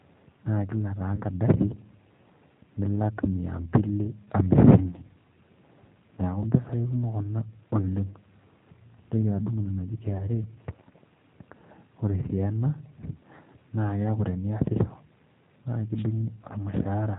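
The whole clip runs through the G.729 codec, and the damage is plainly audible: the speech has that slightly rough, synthetic edge from being rebuilt out of a vocal tract filter and a handful of pulses, with nothing above 4 kHz. That fits G.729A at 8 kbit/s.

There are three short dropouts from VoIP packet loss concealed by the speech codec: 1.16 to 1.22 s, 6.15 to 6.19 s, and 10.17 to 10.29 s, right after "adung' ina naji". Each sounds like about 20 ms went missing. The decoder bridges the gap by stretching its last pitch and filter into a fading sound, and the speech stays thin for a moment afterwards.

Near the end, from 15.95 to 16.05 s, there's a wireless microphone noise hit. It's a quick swish of static where the FM radio link faded and receiver noise rose up over the speech.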